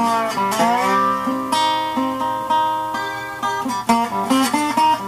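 Throughout, grainy distortion follows the sound, likely low bit depth without dither, fitting 7-bit rounding; waveform shows stair-steps, spectrogram signal-tracking haze about 25 dB down.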